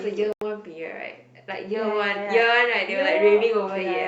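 At 0.33 s the speech drops to silence for about 90 ms, then resumes at 0.42 s. This gap sounds like a Bluetooth stall. Interference likely delayed the wireless packets. The headphones' buffer emptied, and playback halted until the resent data arrived.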